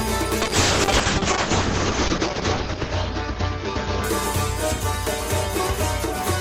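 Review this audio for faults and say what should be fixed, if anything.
A call bitrate drop hits the music from 0.43 to 5.36 s. The top end falls from 20 kHz to 8 kHz. Coarser coding makes it rough and muffled, worst for about 2.1 s. That fits a squeeze from roughly 48 to 7 kbps. Set a higher minimum bitrate for music calls.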